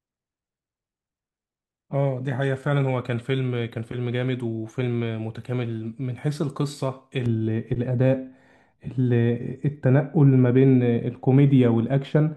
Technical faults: de-emphasis applied wrongly

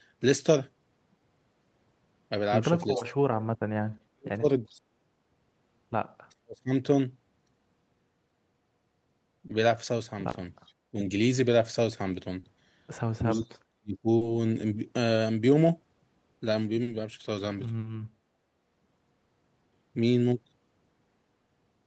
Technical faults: speech suppressed in double talk; echo leak; short concealed packet loss

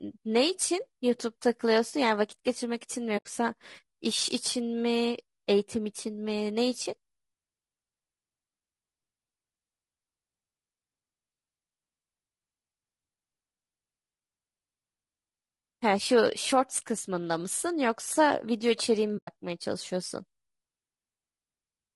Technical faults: low-delay AAC compression; AAC frame loss with muting

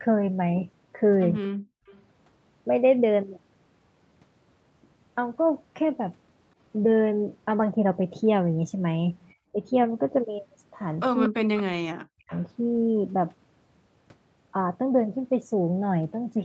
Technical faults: background gated by the echo canceller; echo leak; speech suppressed in double talk

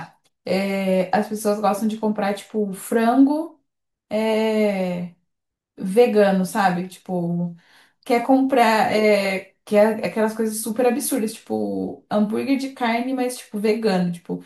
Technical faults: none

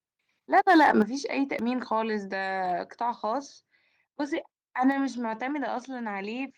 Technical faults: microphone overload; microphone volume stepped down; audio missing between chunks

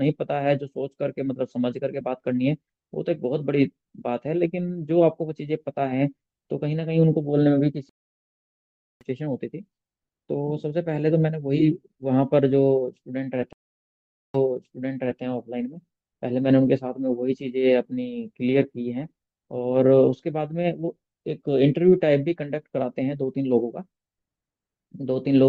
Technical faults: stream reconnect

